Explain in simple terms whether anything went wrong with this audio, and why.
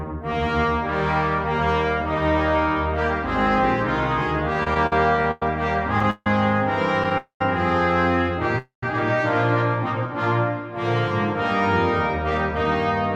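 Yes, two kinds of problem can be heard.

Between 4.53 and 6.27 s there are repeated stalls (stutter). The sound keeps catching and hanging for an instant, ten times in under two seconds, each hold lasting at most about 0.15 s. Together they fill about 0.4 s, nearly a quarter of that stretch. Data was arriving slower than it was played, so the receiver kept running dry and stretching the last bit of sound until more came. Nothing is lost, but the audio drags.

At 7.18 to 7.41 s and again at 8.58 to 8.83 s there is a call audio freeze. Each is a single pause of about a quarter second. The last sound carries on briefly, then fades into roughly an eighth of a second of silence before the audio picks up exactly where it stopped. This is likely caused by data being held up on the way, leaving the receiver with nothing to play. Unlike the stutter, each freeze is one longer hold with a silent stretch in it, not a rapid string of tiny catches.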